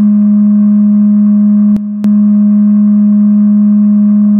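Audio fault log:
1.77–2.04 s, sudden gain jump: the music drops by about 10 dB in a single step at 1.77 s and holds at the lower level until 2.04 s, where it returns to full level just as abruptly. The background noise falls and rises with the music, so the change acts on the whole signal rather than on one source. The lack of any fade at either edge points to a digital gain setting, likely applied sample-to-sample with no ramp.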